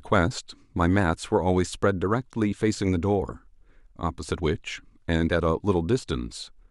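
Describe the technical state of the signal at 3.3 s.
At 3.30 to 3.33 s compressed frames are skipped: a damaged or missing frame is dropped, so the speech jumps ahead by about 20 ms.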